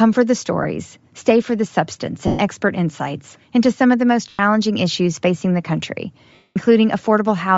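Throughout the speech there is a grainy, breathy edge on the upper frequencies, plainly audible. This is most likely Bluetooth LC3 compression at a low rate, consistent with around 32 kbps in 10 ms frames. The codec discards much of the upper spectrum and fills it with noise. On a spectrogram the high band looks speckled and blotchy rather than showing clean harmonic detail, with texture changing at a steady 10 ms block rhythm.

Lost LE Audio frames then break the sound four times. The first runs from 0.63 to 0.65 s, after "for the" and just before "stay for the substance". It lasts 20 ms, which fits two frames. The second, from 2.27 to 2.39 s, lasts 120 ms, between "stay for the substance" and "expert insights into some". The third, from 4.29 to 4.39 s, lasts 100 ms, after "some of the most" and before "issues facing". The last and longest runs from 6.34 to 6.57 s, about 220 ms.

In each gap the decoder repeats the last spectrum with randomised phase signs, so the sound turns into a hissy, noisy smear. 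In the longer gaps it then fades away. On a spectrogram these appear as flat, smeared vertical blocks that lack the normal speech structure. On the waveform the amplitude decays toward silence, most clearly across the 220 ms gap.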